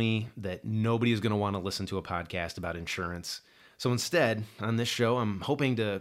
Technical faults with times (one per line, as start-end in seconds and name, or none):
none